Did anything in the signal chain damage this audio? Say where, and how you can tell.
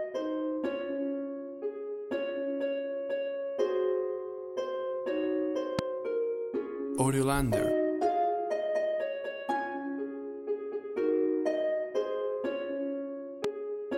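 Yes. Two loud pops, at 5.79 to 5.81 s and 13.44 to 13.47 s, are single sharp transients about 20 dB and 15 dB above the signal, with the sound continuing underneath. The likely source is analogue wiring, where a voltage step from a plug, switch or static was added and then shaped by the downstream circuits.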